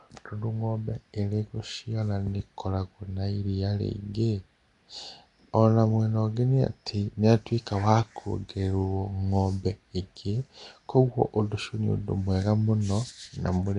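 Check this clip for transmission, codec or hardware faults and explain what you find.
One codec fault runs through the whole recording. From start to finish the speech carries a rough, hissy halo and a smeared, underwater blur, with nothing above 10.6 kHz. The likely cause is Nellymoser compression. Each 256-sample block gets so few bits that weak bands are dropped and refilled with noise, which fits a rate near 44 kbps.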